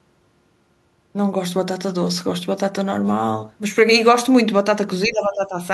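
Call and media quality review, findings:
Speech suppressed in double talk, 5.06–5.54 s: speech dips by up to about 10 dB for half a second. Likely echo canceller turning down near-end talker during far-end activity. Attenuated rather than silent, distinguishing it from packet-loss dropouts.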